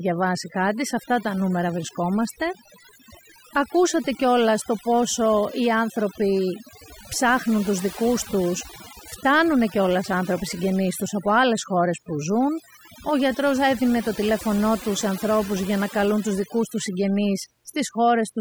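From the very start and all the way through, this speech has been hit with overdone noise removal. The denoiser was pushed far too hard, so any frequency band sitting close to its idea of the noise gets pulled right down or switched off, and the softer parts of the voice get dragged out along with it. You hear a background that's almost dead silent apart from little twinkling specks.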